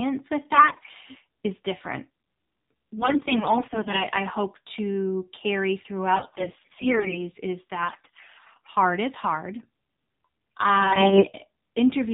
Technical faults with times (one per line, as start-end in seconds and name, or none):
0.00-12.13 AMR narrowband mobile codec
0.54-0.89 AMR bit errors
2.98-4.06 AMR bit errors
6.14-7.23 AMR bit errors
7.82-8.68 AMR bit errors
10.80-11.28 AMR bit errors